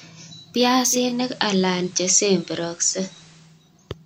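From 0.83 s to 3.65 s, hiss rises to roughly 30 dB below the speech, and the level shifts about 1 dB. This is digital radio blending to analogue: the receiver cross-faded over 388 ms to the FM broadcast, then back.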